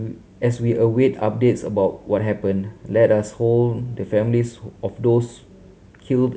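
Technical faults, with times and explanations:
Nothing stood out on listening to the speech in this recording.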